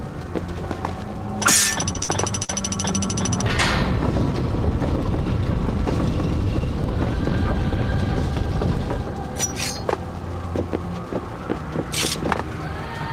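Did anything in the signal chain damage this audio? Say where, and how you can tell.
Yes: repeated packet loss on the network from 1.93 to 2.50 s; four gaps, longest 55 ms, were patched by extending prior sound, giving choppy, robotic audio.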